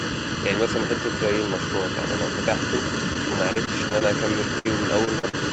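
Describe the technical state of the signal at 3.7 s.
At 3.7 s the sound sits inside a stretch of repeated packet loss (robotic sound) running from 3.53 to 4.03 s. Packets kept arriving late or not at all, and each hole was patched by extending the previous sound, the longest about 27 ms, with about 16% of the span concealed. It comes out choppy. On a spectrogram, smeared, frozen-looking harmonic bands break off abruptly. The waveform shows small repeated or missing chunks.

Channel delay (comb filtering) is present here as well. One channel lags the other by about 0.7 ms, and mixing them to mono cancels energy at regularly spaced frequencies, starting near 700 Hz. The result is hollow and phasey. A spectrogram shows fixed dark horizontal notch lines stacked evenly up the frequency axis.

A second, fainter copy of the voice trails about 0.51 s behind, only a few dB below the direct sound. 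This is likely an echo leak, where a far-end loudspeaker was picked up by the microphone and not fully cancelled. The spectrogram shows the speech pattern repeated with a half-second offset.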